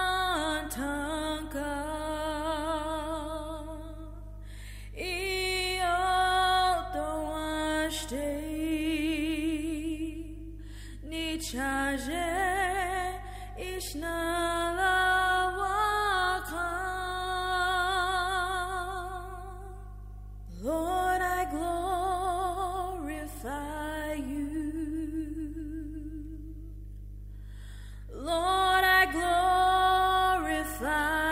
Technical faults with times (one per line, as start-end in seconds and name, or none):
0.00-31.31 mains hum